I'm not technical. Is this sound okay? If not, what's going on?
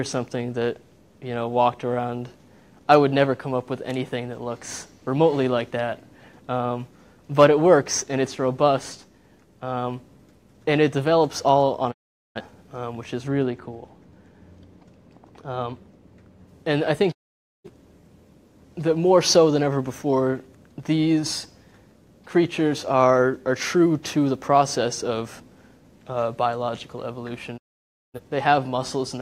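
No, it has two problems. The first is a digital broadcast dropout: at 11.9 to 12.4 s, 17.1 to 17.7 s and 27.6 to 28.2 s, the sound quickly fades to silence for about half a second. The receiver lost the signal and muted itself, so whatever was sent during those gaps is simply gone.

The second is de-emphasis applied wrongly, from 13.3 to 16.5 s. A treble cut meant to undo a boost that was never there gets applied anyway, so the high end drops away and the sound turns noticeably dull and muffled, like listening through a blanket.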